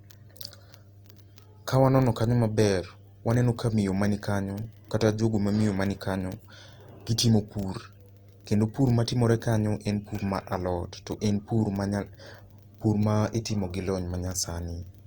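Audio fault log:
Throughout: mains hum. A steady low tone at 50 Hz sits under the speech, with some low harmonics above it. It stays roughly 25 dB below the speech. A ground loop or nearby transformer is letting the power line leak into the signal.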